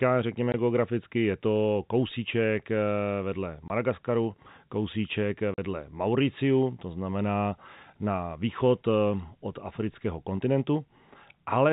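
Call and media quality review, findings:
Packet loss filled with silence: hard-edged dropouts at 0.52–0.54 s before "geograficky je to kousíček", 3.68–3.70 s after "to kousíček eh vedle", 5.54–5.58 s after "kousíček eh". Gaps of 20, 20 and 40 ms fit one or two lost 20 ms packets replaced by silence. The 4 kHz-limited G.711 band carries through.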